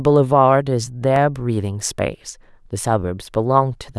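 At 1.16 s the speech drops into a block of digital silence lasting 0.67 ms, a tiny run of zeroed samples with abrupt edges, heard as a single tick.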